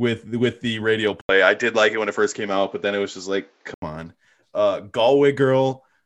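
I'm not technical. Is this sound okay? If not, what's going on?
No. From 1.21 to 3.82 s the speech turns duller and a little boxy, with a brief 80 ms gap at the start and a faint new hiss, though loudness stays the same. The likely cause is an input switched to a poorer device, a device that loses everything above 7.5 kHz.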